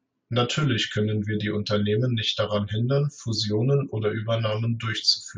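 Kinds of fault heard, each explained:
No faults of any kind can be heard in this recording. The speech carries on without any break, dropout or added disturbance at any point.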